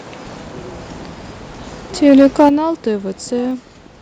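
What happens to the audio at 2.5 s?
From 2.07 to 2.49 s the loudest peaks flatten out with a harsh, crackly edge, likely microphone overload: the input runs about 5 dB past the converter's ceiling, so around one in twenty samples are clipped. Unlike a limiter's smooth squashing, the waveform tops are sheared off. Then at 2.49 s the voice and the background drop together by about 8 dB in a single step. That points to the call software stepping the microphone volume down. It is one abrupt gain change rather than a gradual fade.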